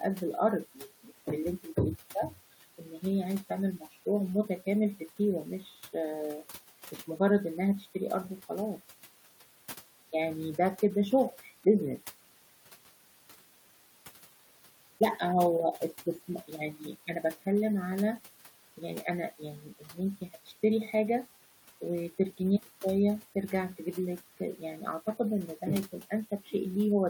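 Noise suppressor artifacts run through the whole recording. The room noise sits about 20 dB below the speech. A suppressor works frame by frame. It judges which frequency bands hold steady noise and turns them down, here by about 12 dB. The noise is pulled down in the pauses between words. When speech starts, the suppressor lets go, and the noise comes back up beneath it. The background pumps with the talking instead of staying level.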